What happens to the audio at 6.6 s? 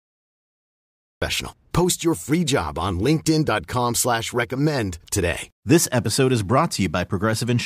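Nothing goes wrong at 6.6 s: the speech carries on intact through that moment, with no dropout, click or distortion.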